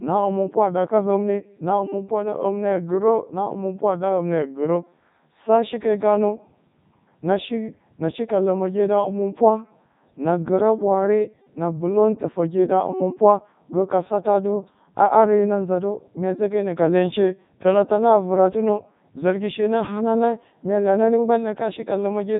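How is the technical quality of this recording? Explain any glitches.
Poor: the speech has gone through a very low-bitrate vocoder for its whole length.

Codec 2 vocoder, throughout: the decoder rebuilds the speech from sine waves driven by pitch, voicing, energy and a coarse spectral envelope, discarding the real waveform. The result is heavily robotic and buzzy, with nothing above 3.8 kHz, which fits the 3.2 kbit/s mode.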